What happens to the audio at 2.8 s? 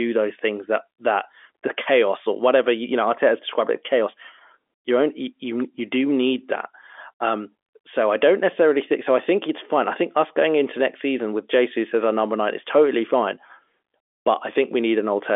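Nothing goes wrong at 2.8 s: the speech passes through intact, carrying only the narrow telephone band of its G.711 coding, with nothing above about 3.7 kHz.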